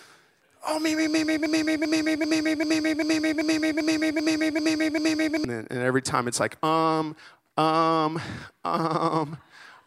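From 1.46 s to 5.45 s, after "me me me me", a broken-record loop repeats one 0.39 s fragment exactly, back to back, ten times before "then and every time". A stalled player or stream likely kept resending its last fragment, so the speech that belonged in that span is lost.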